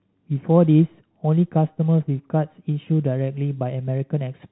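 No technical faults are audible.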